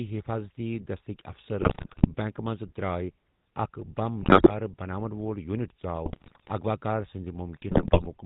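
From start to finish the speech carries the buzzy, gravelly grain of the GSM full-rate codec at 13 kbps, with nothing above 4 kHz. It models the voice with a vocal-tract filter fed by sparse regular pulses. Unlike plain band-limiting, it sounds rough and reedy, not simply muffled.

GSM bit errors then break in at 1.60–2.08 s, 4.22–4.54 s (just before "بناون وول"), 6.06–6.51 s and 7.68–8.07 s. Corrupted filter, pitch and gain values warp frames into squawks, pops and gargling, with sudden level jumps that distinguish them from dropout gaps or steady codec roughness.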